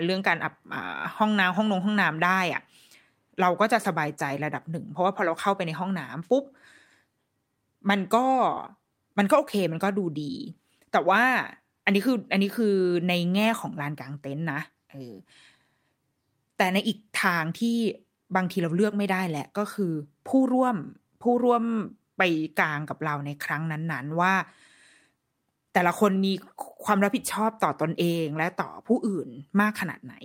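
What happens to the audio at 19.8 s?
Nothing goes wrong at 19.8 s; the speech there runs on intact, with no dropout, click or other fault.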